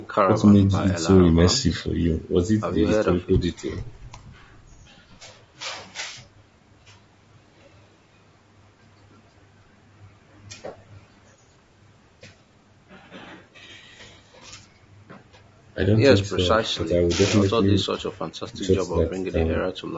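From start to finish the speech sounds rough and grainy, with a hiss sitting between the harmonics. The likely cause is low-delay AAC compression, the AAC-ELD coding of video calls, with the plainly audible damage pointing to a low rate near 32 kbps. Its short frames resolve pitch poorly. Dropouts or glitches would come and go instead. The band ends at 8 kHz.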